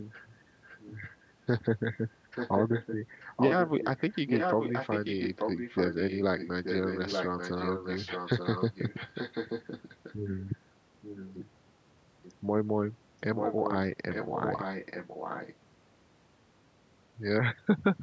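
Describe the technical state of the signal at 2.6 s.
At 2.6 s an echo leak is audible, spanning 2.35 to 2.96 s. A copy of the speech returns 0.88 s late and only slightly quieter, likely residue from a loudspeaker end's echo canceller. A spectrogram shows the same harmonic patterns repeated, shifted by that delay.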